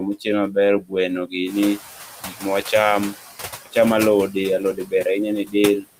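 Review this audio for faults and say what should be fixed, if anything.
Noise suppressor artifacts run through the whole clip. The suppressor pulls about 9 dB out of every band it judges to be steady noise, frame by frame. The background therefore dips between phrases and swells back under the speech. Unlike room noise, which belongs to the recording itself, this residue pumps in step with the speech. A gentler reduction depth and smoother per-band gain changes would prevent it.

Speech cut by the noise suppressor occurs four times: 0.82 to 0.93 s, just after "mochiel maber", with a drop of about 15 dB; 2.23 to 2.45 s, about 18 dB; 4.59 to 5.05 s, about 14 dB; and 5.45 to 5.55 s, about 12 dB. Quiet speech energy was mistaken for noise and turned down with it, so those moments sound swallowed or faint. Unlike the general background dips, these are brief, local holes in the speech itself. 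A less aggressive noise classification with a speech-presence guard would prevent them.

Noise suppressor catching up runs from 1.46 to 3.16 s. The room noise, which is part of the recording, jumps by about 11 dB around one and a half seconds in and settles about 14 dB below the speech. The suppressor's noise estimate lags, so the louder noise comes through with less reduction at first. It then sinks toward the usual 9 dB cut over about 1.7 s. What sets this apart is a slow, steady fade rather than rapid pumping. A faster-tracking noise estimate would prevent it.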